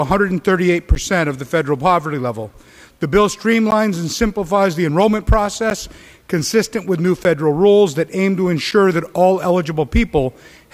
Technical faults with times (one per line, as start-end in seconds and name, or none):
0.95 block of digital silence
3.71 block of digital silence
5.70 block of digital silence
7.24 block of digital silence
8.71 block of digital silence